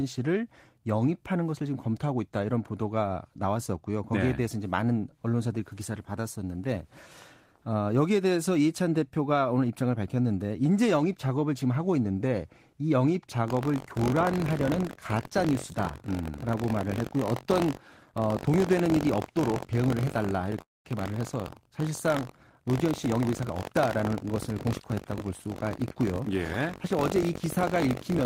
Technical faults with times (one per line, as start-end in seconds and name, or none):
13.46-28.25 buffer tearing
20.61-20.87 call audio freeze
22.71-25.11 jitter buffer speed-up